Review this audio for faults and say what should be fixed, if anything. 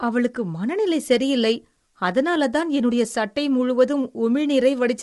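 The speech is rough and grainy for the whole clip, with a hiss-like fill between the pitch harmonics and nothing above 11.6 kHz. That points to low-delay AAC compression, likely AAC-ELD at a bitrate around 32 kbps. Its short frames can't resolve the harmonics cleanly, so at that rate the coder smears noise into the gaps and drops the top band. To prevent it, record locally or give the call codec a higher bitrate.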